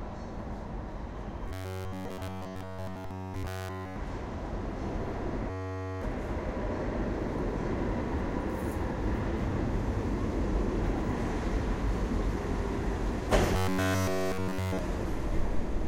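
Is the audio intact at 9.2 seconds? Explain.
Yes, at 9.2 seconds the audio is intact, with no dropout, click, distortion or other fault to be heard at that moment.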